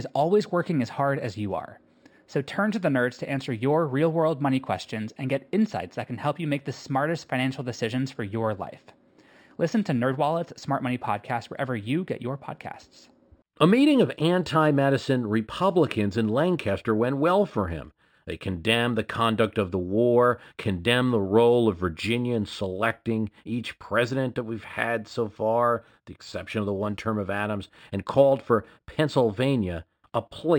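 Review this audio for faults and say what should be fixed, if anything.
The whole clip has imaging from linear upsampling. The speech sounds like it was brought up from 12 kHz to 44.1 kHz by simply drawing straight lines between samples, and that's a weak filter. The top of the original band near 6 kHz comes out dulled, and a mirrored copy of the spectrum sits between 6 and 12 kHz at roughly 30 dB down, giving sibilants a faint metallic shimmer. Next time, resample with a proper windowed-sinc or polyphase filter that removes everything above 6 kHz.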